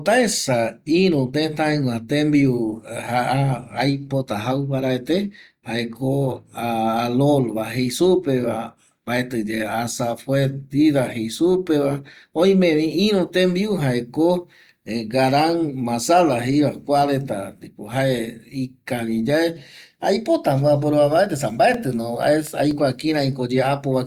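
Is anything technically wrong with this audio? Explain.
Yes, there are CD scratch ticks from 21.26 to 22.95 s: eight regular ticks, the longest about 4 ms, where a disc blemish defeated error correction on each rotation.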